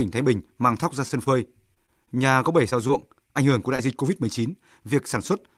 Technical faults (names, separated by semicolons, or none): scattered short gaps; jitter buffer slow-down; short concealed packet loss